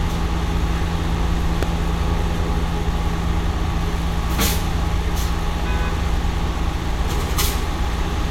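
At 1.63 to 1.65 s a single loud pop cuts in, standing well above the surrounding sound. A sudden voltage pulse, likely from a plug, switch or static discharge, was added to the signal. Unlike a dropout click, nothing goes missing: the sound continues unbroken beneath the thump.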